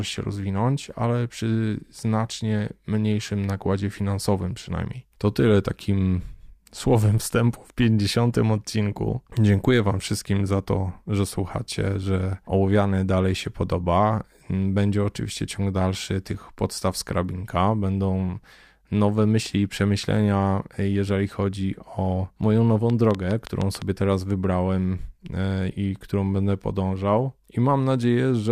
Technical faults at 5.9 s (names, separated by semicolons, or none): none